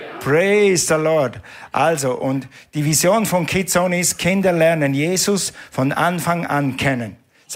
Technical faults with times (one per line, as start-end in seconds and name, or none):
none